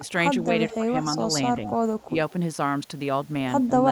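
At 0.68 to 0.76 s and 1.64 to 1.72 s there's an echo leak: a copy of the speech trailing 188 ms behind at about 15 dB down, plus a faint trace around 2.0 s. It's likely loudspeaker pickup slipping past the far end's canceller. Straight after, at 0.77 to 0.94 s and 2.06 to 2.17 s, the speech is suppressed in double talk, dipping around 10 dB and then around 20 dB. That's likely the canceller ducking its own talker along with the echo while both sides overlap.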